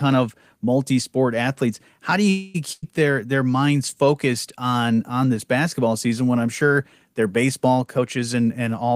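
It's a speech clip with three network-type problems. From 2.29 to 2.56 s the last sound hangs on as a fading buzz or hiss for about 250 ms before picking up where it left off, with nothing lost. That's likely a call audio freeze, with late packets draining the jitter buffer. Right after, at 2.72 to 2.84 s, there's a burst of packet loss: roughly 100 ms is concealed by a decaying hold of the previous sound, then it jumps ahead with that chunk missing. Finally, just after "I'm sure their baseball", from 7.99 to 8.91 s, a jitter buffer speed-up trims short pitch-period slices, somewhere around 150 ms in total, so the speech runs about 16% fast at unchanged pitch and sounds hurried.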